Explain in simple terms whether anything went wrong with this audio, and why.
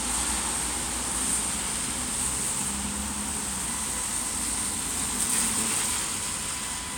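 A steady, high-pitched whine appears at 3.68 s and continues to the end. This is USB whine. A USB connection moves data in regular one-millisecond bursts, and each burst pulls a little current. That electrical ripple leaks into the audio through the shared power or ground wiring, turning into a fixed tone at 1 kHz. The whine is quieter than the main sound.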